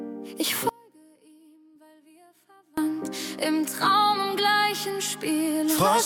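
At 0.69 s the sound drops abruptly to a faint residue, about 30 dB down, until 2.78 s, roughly 2.1 s lost: an audio dropout to a faint residue, likely a signal break with the path left live. The hard edges distinguish it from a fade or natural pause.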